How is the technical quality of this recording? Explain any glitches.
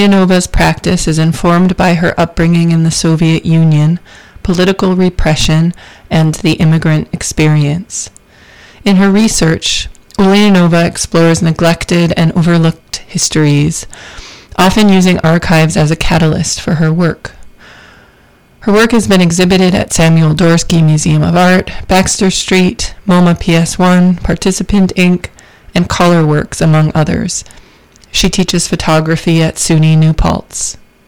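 A harsh, gritty fuzz sits on every loud moment from start to finish, so the technical quality is poor. This is hard clipping. The signal is driven about 19 dB beyond what the recording chain could pass, so its peaks are sliced off flat, and roughly 15 percent of the samples went over that limit. Those squared-off tops add harmonics high into the spectrum, which produces the buzzing distortion on loud sounds rather than occasional crackles.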